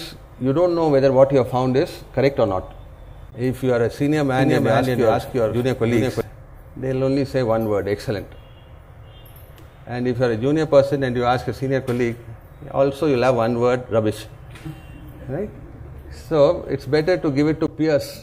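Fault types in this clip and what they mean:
Doubled audio track: a slower second path likely captures the audio again, adding an equally loud, dry copy about 400 ms behind that starts and stops abruptly.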